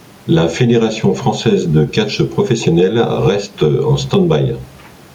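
Gain pumping runs through the whole speech clip. The level is never steady. The swing is around ten decibels. Loud and quiet passages sit close together, and the sound feels squashed. The likely cause is input gain set far too high, with a fast limiter clamping down on each loud sound. The room noise sits about 39 dB below the speech.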